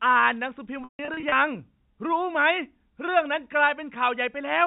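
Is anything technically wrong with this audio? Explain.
Yes. Between 0.84 and 1.32 s there is packet loss with pitch repetition: about 270 ms of audio dropped out in bursts spread across roughly 480 ms. The receiver concealed each gap by looping the last pitch period, so the brief losses come across as a held, buzzy tone. The longest run, 150 ms, outlasts the fade and decays into silence before the speech cross-fades back in. The telephone-band sound, cut off at 4 kHz, comes from the G.711 coding.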